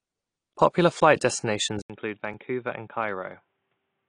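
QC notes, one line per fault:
Throughout: AAC compression. Nothing reaches above 10 kHz, so the speech sounds dull and smeared. Sibilants carry a fizzy, warbling texture. The encoder dropped the top band and quantised the rest coarsely. The damage plainly fits a low bitrate near 32 kbps, likely AAC-LC.
1.82 to 4.09 s: input switched to a poorer device. An 80 ms silence marks the switch. After it nothing passes above 3.8 kHz, so the sound turns boxy. The level drops about 5 dB, and a faint new noise floor appears far below the signal. The likely cause is a different microphone or a headset call profile.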